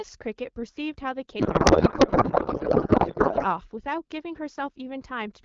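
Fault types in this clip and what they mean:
Codec payload misread: from about 1.39 to 3.45 s the speech gives way to garbled noise and warble that barely tracks it, because the decoder is pulling fields from the wrong bit positions in frames that still look valid. The garble points to octet-aligned AMR being read as bandwidth-efficient. Either side of that stretch, the AMR wideband speech at 12.65 kbit/s carries only light coding damage.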